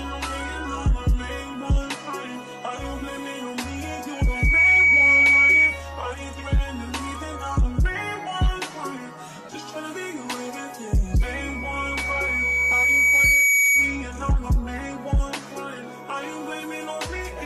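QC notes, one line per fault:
4.16–5.84 s and 11.20–14.07 s, loudspeaker feedback squeal: a single 2.3 kHz tone swells to about 10 dB above the sound, in under half a second the first time and over about two seconds the second. The mic is picking up its own speaker, and loop gain tops one there.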